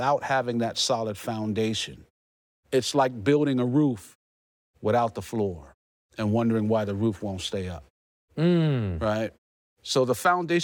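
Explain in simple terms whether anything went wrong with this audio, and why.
Nothing went wrong here; no faults are audible.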